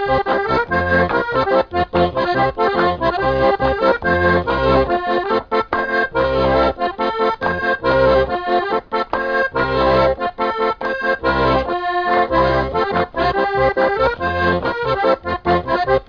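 No technical faults are audible anywhere in this audio.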